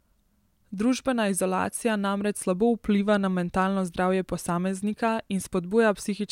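No technical faults can be heard in this recording.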